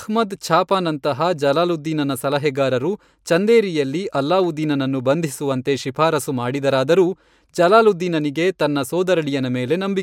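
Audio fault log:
Nothing stood out on listening to the speech recording.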